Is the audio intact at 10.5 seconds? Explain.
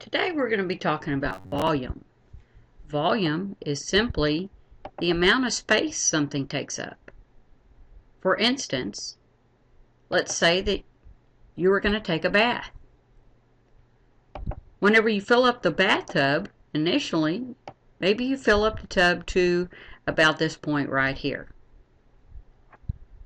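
Yes, the audio at 10.5 seconds is intact, with no dropout, click, distortion or other fault audible at that point.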